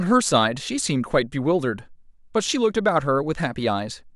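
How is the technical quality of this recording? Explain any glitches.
Nothing in this recording glitches or breaks up, so there's really nothing to flag on the technical side.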